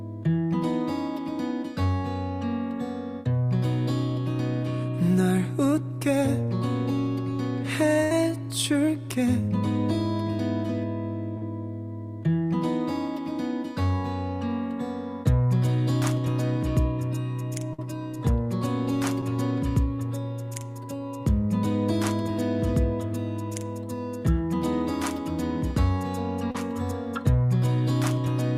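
At 8.03 to 8.12 s, a burst of packet loss leaves about 70 ms of audio that never arrives in time. The receiver stretches the last sound across the hole and fades it, so the sound briefly freezes into a held buzz or thinning hiss before jumping ahead past the missing stretch. The same happens at 17.73 to 17.79 s, with about 50 ms lost and a shorter frozen patch.

Between and after these come three instances of short concealed packet loss, where a few hundredths of a second drop out and the decoder synthesizes a bridge from the preceding sound before blending back in. At 11.38 to 11.42 s, roughly 40 ms is patched, heard as a brief smear. At 19.21 s, only about 10 ms goes missing, leaving a brief wobble. At 26.51 to 26.55 s, about 30 ms is filled, giving a short wobble where a brief sound can vanish.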